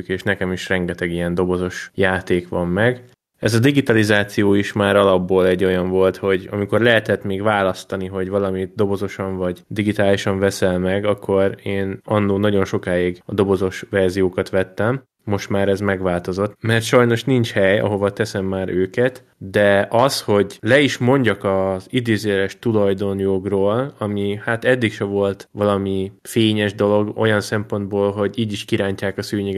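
No technical faults are audible anywhere in the speech recording.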